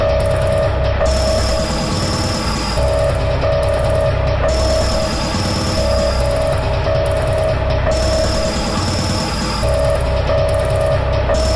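No technical faults can be heard anywhere in this recording.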